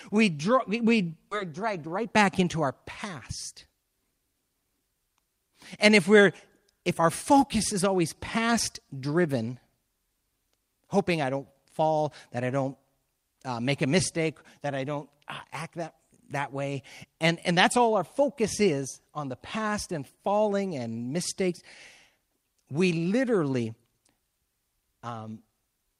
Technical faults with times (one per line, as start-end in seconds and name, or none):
1.31-1.33 skip ahead
1.43-4.95 jitter buffer speed-up